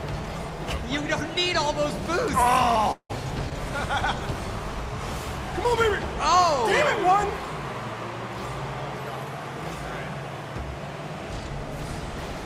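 From 2.91 to 3.11 s the sound breaks off in what is likely a long network dropout: the last sound is stretched into a fading buzz or hiss, with about 70 ms of silence, then the audio resumes about 180 ms further on. That skipped material, rather than a plain click or mute, marks it.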